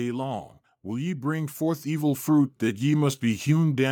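From 0.84 s to 3.52 s the speech shows automatic gain rising: the gain control judged the incoming level too low and pushed its gain up by about 9 dB, slowly rather than in a step. Voice and background noise swell together over those 2.7 seconds. On a waveform the envelope widens steadily across that span, and on a spectrogram the whole picture, noise floor included, brightens evenly at every frequency.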